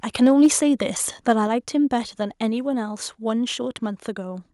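From 0.22 to 0.46 s the microphone input was likely set too high, causing microphone overload: peaks overshoot the converter's limit by about 2 dB and their tops are sheared off on a few percent of samples, giving loud syllables a harsh, crackly edge. At 0.46 s the input gain was likely stepped down by the call software, so the microphone volume stepped down by about 2 dB, and speech and background abruptly drop in level. From 1.29 to 1.32 s the input, likely still running hot, overloads the microphone again, peaking about 1 dB over, and a brief crackle cuts into the speech.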